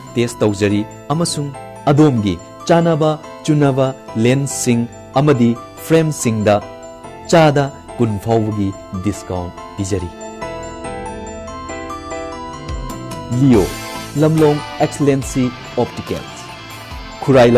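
No technical faults can be heard at any point in the audio.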